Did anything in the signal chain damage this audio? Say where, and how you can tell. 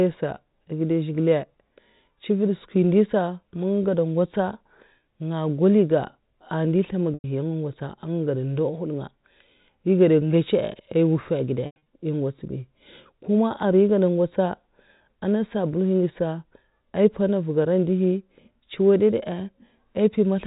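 Yes, at the network stage: packet loss with pitch repetition at 7.14–7.24 s (about 100 ms lost) and 11.66–11.86 s (160 ms lost in bursts over 200 ms, longest run 100 ms). The receiver loops the last pitch period, so each gap becomes a held, buzzy tone that fades away.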